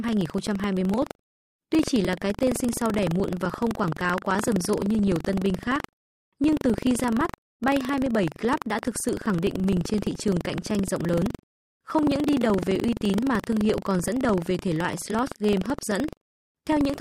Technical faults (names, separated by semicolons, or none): buffer tearing